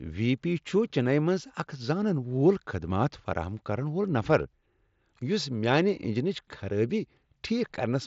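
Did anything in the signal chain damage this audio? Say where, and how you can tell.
No, nothing in the signal chain damaged this speech recording. It passed through a Bluetooth mSBC headset codec working normally, which is why the audio holds nothing above 7.7 kHz, the expected ceiling for that wideband link.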